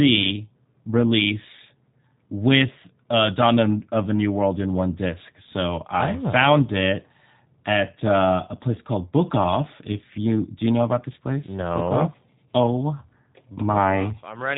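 From start to end, the speech carries G.729 codec damage, and it is plainly audible. Nothing above 3.8 kHz survives, so the top of the band is simply gone. The sound points to the G.729A variant, which fits a rate of 8 kbit/s. At that rate the codec does not keep the waveform. It models each short frame with a vocal tract filter, a pitch predictor and a few pulses, then rebuilds the speech from them. The result sounds rough and synthetic.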